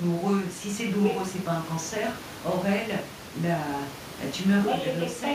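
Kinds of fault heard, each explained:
Nothing here points to a system fault; the room noise, sitting about 19 dB under the speech, is simply part of where it was recorded.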